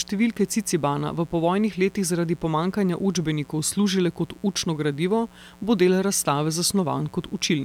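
From start to finish, a mains buzz sits underneath the speech, a steady, raspy hum at a level somewhere around 30 dB below it. It comes from a 60 Hz supply: something like a dimmer, a rectifier or a broken shield injects sharp switching spikes twice per cycle, so the interference pulses at 120 Hz. On a spectrogram this shows as a comb of unbroken horizontal lines at multiples of 60 Hz climbing to several kHz. The waveform carries small spikes every 8.3 ms, visible in the pauses.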